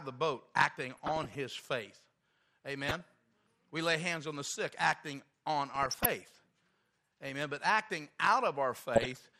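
MP2 compression throughout: the speech sounds dull and granular, with gurgling where upper sub-bands drop out, likely from MPEG Layer II coding at a low rate, which fits about 80 kbps. DAB burbling at 0.87 to 1.35 s just after "of the boat", 2.85 to 3.01 s, 5.75 to 6.06 s just after "the sick acting on", and 8.96 to 9.20 s: short blips of noise appear in single sub-bands, which points to a bit error rate of roughly 0.4 to 0.7 percent getting past error correction.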